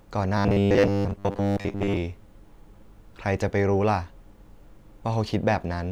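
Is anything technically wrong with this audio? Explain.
Yes. From 0.38 to 1.97 s the speech takes on a robotic sound from repeated short buffers. It becomes a rigid, metallic buzz fixed at 100 Hz, though it still roughly tracks the words. The likely cause is new audio arriving too slowly, so playback loops the last chunk to fill the gap while real audio is skipped. A 100 Hz buzz fits a chunk about 10 ms long. Repeats fill most of that stretch.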